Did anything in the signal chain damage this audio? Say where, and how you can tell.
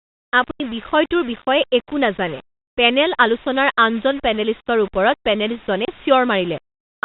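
Yes. A sample-format conversion stage likely rounded the audio to about 6 bits without dither, leaving grainy distortion about 20 dB below the speech that rises and falls with it.

On the network, packet loss filled with silence cut hard-edged gaps at 0.51–0.6 s (90 ms) and 5.85–5.88 s (30 ms), which fits three 30 ms packets, then one.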